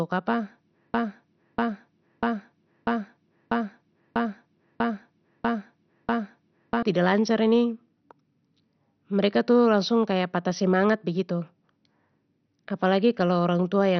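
A speech recording, about 14 seconds long, with two problems. The whole clip is dull and gurgly, with a granular, watery grit on every syllable and nothing above about 6.2 kHz. That's the sound of MP2 compression pushed hard. Layer II has likely run out of bits, so it has shut off the upper sub-bands entirely and quantised the remaining ones coarsely, which fits a low rate of around 48 kbps. The bands flickering on and off give it that low-rate digital radio texture. Then from 0.94 s to 6.83 s there's a broken-record loop. A chunk of about 0.64 s repeats exactly, back to back, nine times, for nearly six seconds. The stream or decoder most likely stalled and kept replaying the last fragment it held, so whatever should have played in that stretch is lost.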